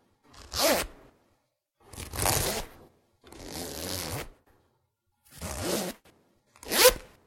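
No technical faults can be heard anywhere in this audio.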